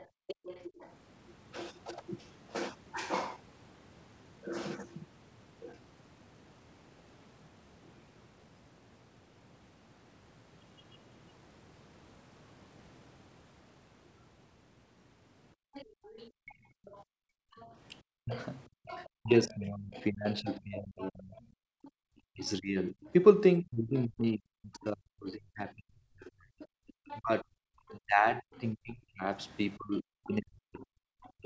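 Speech recorded over a call, with echo-control faults. The other side's voice leaking through is heard from 0.0 to 0.95 s, 15.73 to 24.84 s and 26.6 s to the end. It sits roughly 15 to 20 dB below the talker, likely because the echo canceller left some loudspeaker sound in the microphone. Background gated by the echo canceller appears at 0.08 to 0.27 s, 15.55 to 18.87 s and 21.63 to 22.03 s. The room sound drops by about 40 dB and then returns. The canceller clamped the microphone while the loudspeaker played. Speech suppressed in double talk runs from 18.06 s to the end. The talker's voice dips by around 40 dB while the far side speaks. This is likely because the canceller turned both voices down when it could not tell them apart. The G.722 call path limits everything to 8 kHz.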